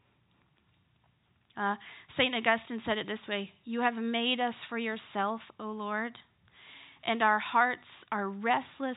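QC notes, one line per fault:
Nothing to flag here; the speech simply carries the narrow telephone sound of G.711 coding, with nothing above about 3.8 kHz and at most a faint trace of its quantisation hiss riding along with the level.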